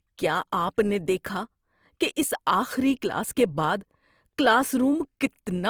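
From start to finish the speech carries the artefacts of an earlier low-bitrate encoding, even though the spectrum runs all the way up to about 20.2 kHz with nothing above. This is low-bitrate audio saved at a high bitrate: the damage likely comes from an earlier low-rate pass, consistent with Opus at around 24 kbit/s, later re-encoded as MP3 at a rate fitting 192 kbit/s. The larger second file cannot restore detail the first encoder discarded.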